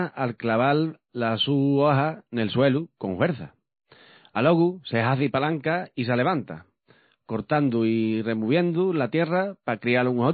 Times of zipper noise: none

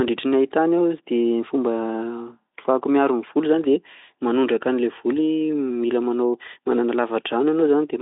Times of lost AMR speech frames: none

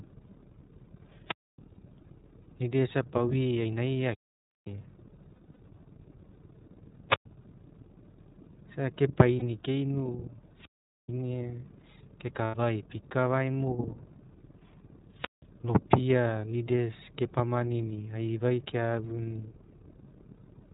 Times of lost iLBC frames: 1.74-1.77, 5.34-5.58, 9.39-9.43, 12.45-12.55

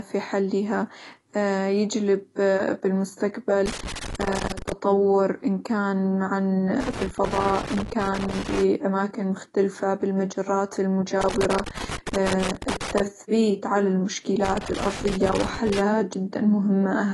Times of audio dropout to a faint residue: none

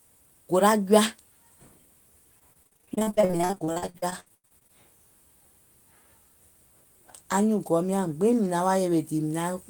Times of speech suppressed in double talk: none

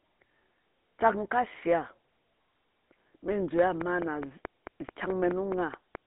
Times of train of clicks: 3.59-5.96

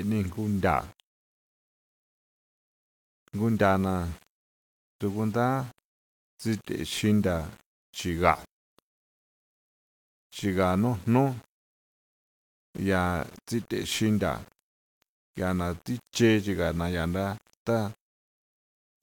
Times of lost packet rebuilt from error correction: none

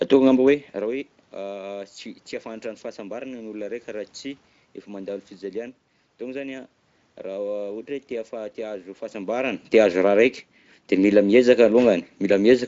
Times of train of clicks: none

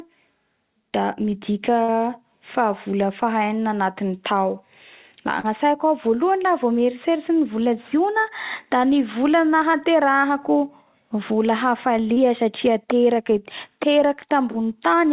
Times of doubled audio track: none

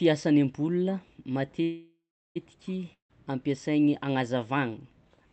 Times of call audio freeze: 1.63-2.37

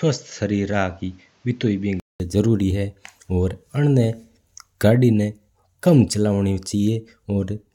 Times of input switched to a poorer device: 0.00-2.20

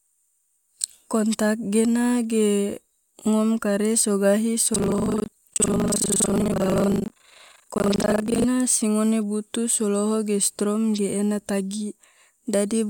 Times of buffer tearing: 4.72-8.46

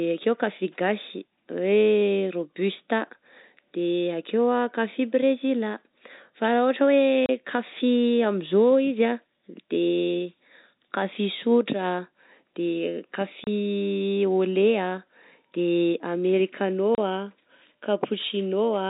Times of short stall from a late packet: none

